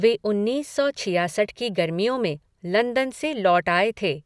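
Nothing goes wrong anywhere in this bit of speech; there's simply no technical fault to point to.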